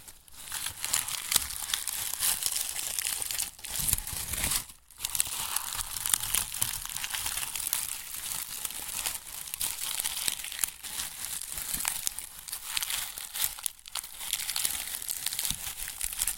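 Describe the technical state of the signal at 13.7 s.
At 13.7 s the audio is intact, with no dropout, distortion or other fault audible.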